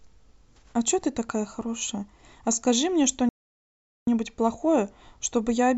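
At 3.29 s the speech just drops out and stays silent until 4.07 s, a gap of about 0.78 s, before the audio picks back up. That's a playback stall: the output went dead in mid-flow for a clearly noticeable stretch. The likely cause is the player running dry of data or its audio thread getting blocked, so nothing reached the output until it recovered.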